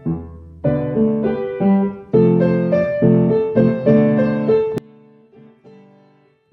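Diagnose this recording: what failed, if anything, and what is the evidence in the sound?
From 4.78 s to the end at 6.53 s, the sound collapses by about 32 dB to a faint residue, the signature of one channel inverted, likely from a polarity-swapped lead in the analogue wiring. With one side flipped, everything common to both channels cancels once they are summed, leaving only their small difference. On a waveform the envelope drops abruptly to a sliver; a spectrogram shows energy vanishing across the band.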